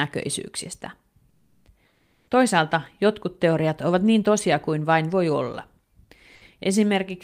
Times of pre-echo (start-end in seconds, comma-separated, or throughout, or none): none